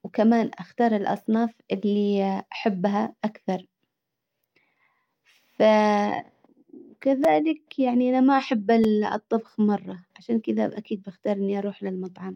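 A speech clip with two brief clicks, at 7.24 s just before "يعني انا ما احب" and at 8.84 s just before "الطبخ مرة عشان كدا". Each is a repeated buffer: audio arrived late, so a tiny piece, about 5 ms long, played twice with a hard join.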